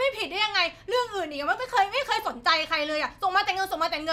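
No technical faults are audible anywhere in the recording.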